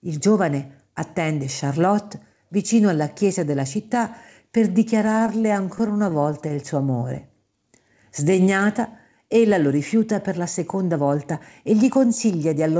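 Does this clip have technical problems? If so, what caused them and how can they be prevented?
Yes, there are three. From 5.06 to 6.57 s you get repeated stalls, a stutter: the packets kept arriving late, so the jitter buffer ran dry 19 times in that stretch. Each time the receiver just carried the last sound on for a moment, never longer than 14 ms, adding about 191 ms in all, roughly 13% of that span. Nothing is actually lost, but the audio catches and drags. To prevent it, fix the network path's delay variation or let the buffer hold a bit more reserve.

Right after, from 6.92 to 7.84 s, there's a jitter buffer slow-down. The buffer was running low, so the receiver padded it by repeating single pitch periods and bits of pause many times over, adding about 101 ms. That stretch plays at around 90% speed with the pitch unchanged, so sounds get drawn out. To prevent it, keep the buffer from draining in the first place with steadier packet delivery or a slightly larger target delay.

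Then from 10.39 to 11.9 s there's a jitter buffer speed-up, which goes the other way. The buffer had piled up more audio than it wanted, probably from late packets landing together, so it trimmed tiny pitch-period slices again and again, about a tenth of a second in total. The audio runs at around 106% speed at the same pitch and sounds a little hurried. To prevent it, smooth out the bursty delivery so the buffer doesn't overfill.

All of this sits on a call path whose coding noise and lack of anything above 8 kHz fit G.722 at 64 kbps.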